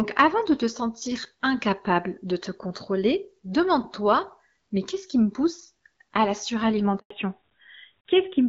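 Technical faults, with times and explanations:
6.98 to 7.10 s, handover gap: The speech fades out within a few tens of milliseconds, then stays silent for 120 ms. The call was passing between networks, and no speech frames arrived during the switch. Whatever was said in that gap is lost.
7.10 s to the end, fallback to narrowband: From this point nothing remains above 4 kHz. The speech turns duller and rougher. Before it, HD Voice sounds clear, which fits AMR-WB at 12.65 kbit/s. Afterwards the sound fits the older AMR-NB codec at 12.2 kbit/s.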